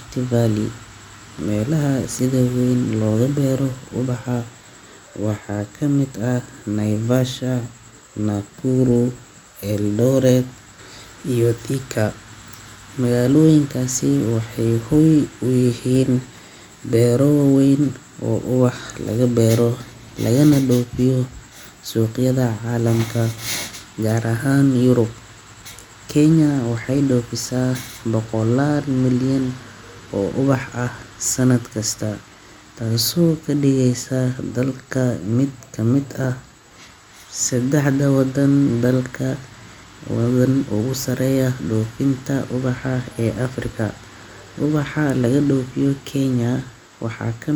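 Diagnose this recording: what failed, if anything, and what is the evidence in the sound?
Nothing failed; no fault is audible in this recording.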